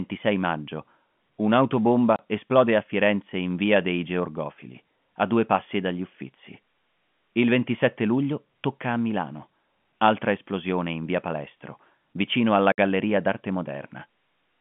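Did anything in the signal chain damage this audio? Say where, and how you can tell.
Yes. Packet loss filled with silence, at the network stage: the speech drops to dead silence at 2.16–2.19 s (30 ms) and 12.72–12.78 s (60 ms), with hard edges. The second gap is twice the first, which fits one and two lost 30 ms packets replaced by silence.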